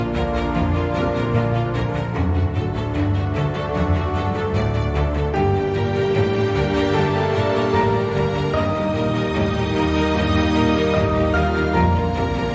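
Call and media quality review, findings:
No audible impairment found on the signal path; levels, continuity and timing hold steady across the whole capture.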